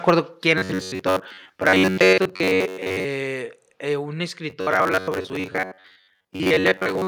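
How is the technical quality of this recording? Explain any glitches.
The recording quality is poor, with three kinds of fault in the speech.

Microphone overload occurs at 0.08 to 0.10 s, 1.66 to 1.73 s and 2.00 to 2.13 s. The input gain was likely set too high, so peaks ran about 3 to 5 dB past the converter's ceiling. Their tops are sheared flat, giving the loudest moments a harsh, crackly grit.

A microphone volume step-down follows two of those overloads, at 0.10 s and 2.13 s. Software reacting to the clipping likely cut the input gain in a single jump, first about 2 dB and then about 4 dB. Speech and background drop abruptly in level together.

Robotic sound from repeated short buffers runs from 0.58 to 3.04 s and from 4.5 s to the end. Audio arrived too seldom, and the gap was likely filled by replaying a short slice, about 10.7 ms long, for most of each stretch. That loop imposes a rigid, metallic buzz at 93.8 Hz that still loosely tracks the speech.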